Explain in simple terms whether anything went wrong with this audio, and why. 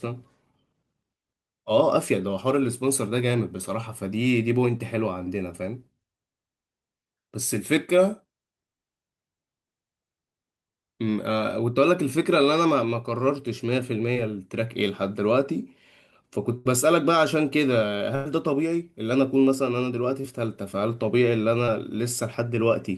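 Yes, the call lost audio six times. Four are short concealed packet loss, at 4.77, 14.14, 20.21 and 21.66 seconds: about 20 ms of speech arrived too late, and the receiver papered over it by extending the previous sound, leaving a brief smear or wobble.

The other two are bursts of packet loss, at 16.57 to 16.67 seconds and 18.15 to 18.27 seconds. About 80 ms and then 100 ms went missing. The receiver stretched the last sound into a fading buzz or hiss, then skipped ahead, so that stretch of speech is gone.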